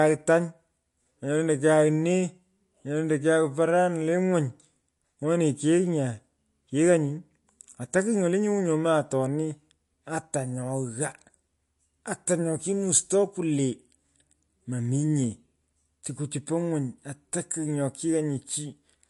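Throughout the speech, nothing sounds above 11.3 kHz, and the upper band has a plainly audible watery swirl with metallic chirps on s sounds. That points to MP3 compression, likely at a low bitrate near 48 kbps. A plain low-pass filter would dull the treble without the swirl.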